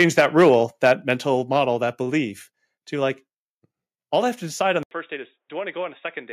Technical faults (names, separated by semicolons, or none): microphone overload; microphone volume stepped down; input switched to a poorer device